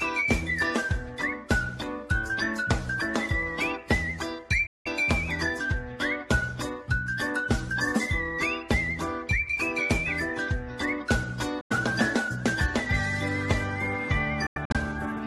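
Sudden silent holes at 4.67 to 4.87 s, 11.61 to 11.72 s, and in broken bursts from 14.47 to 14.77 s, with the sound resuming as if it had played on: likely Bluetooth dropout, with packets arriving too late and discarded.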